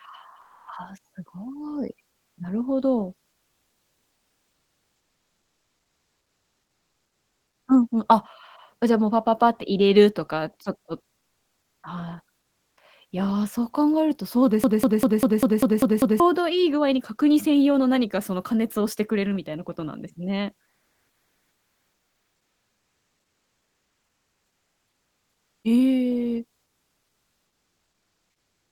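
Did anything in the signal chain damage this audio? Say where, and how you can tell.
Yes. Comfort noise in place of the background appears at 0.41–0.67 s, 11.17–11.83 s, 12.39–12.77 s and 20.69–25.63 s. The real background is swapped for smoother synthetic noise, about 3 dB louder in the first pause, about 3 dB and about 2 dB quieter in the next two, and level-matched in the longest. This is likely codec discontinuous transmission, such as Opus DTX, filling the gaps.

A broken-record loop runs from 14.64 s to 16.2 s, where a roughly 0.2 s fragment repeats exactly, back to back, eight times. This likely means the playback, encoder or stream stalled and kept resending its last held fragment, so the audio that should have played there is lost.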